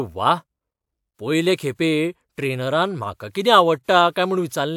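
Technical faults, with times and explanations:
Nothing technical goes wrong anywhere in this bit of speech, so there's no fault to point to.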